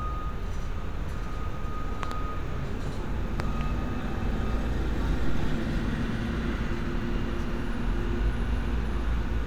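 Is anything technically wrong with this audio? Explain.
Yes, there are loud pops. At 2.03–2.14 s and 3.40–3.63 s, a double pop about 15 dB above the sound is likely caused by a voltage step from a switch or static. Unlike a dropout, the sound continues underneath.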